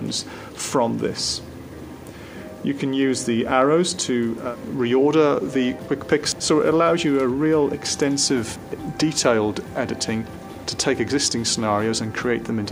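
From 0.10 s to the end, clock slip clicks form a soft, regular rattle about every 20 ms. The likely cause is two unsynchronised clocks roughly a thousand ppm apart, each slip one sample. A spectrogram shows evenly spaced faint vertical lines; the waveform shows tiny steps.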